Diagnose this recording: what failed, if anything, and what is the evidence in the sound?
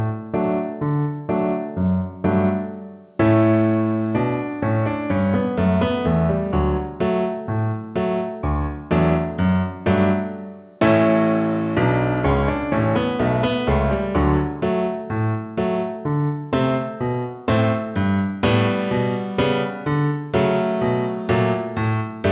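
Nothing stood out on listening: the audio comes across as a normal call path, with its band ending around 4 kHz as the call codec leaves it, and no failure at any stage.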